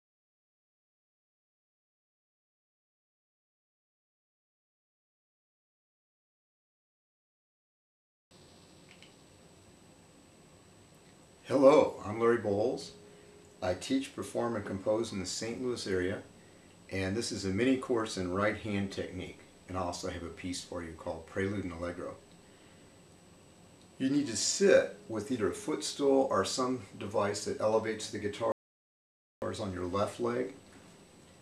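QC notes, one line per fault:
28.52–29.42 s, audio dropout to silence: the sound cuts off mid-flow for about 0.9 s and returns abruptly, with no room tone in the gap. The input was likely lost, through a disconnected device, failed link or stray mute, while recording continued writing silence, so that material is gone.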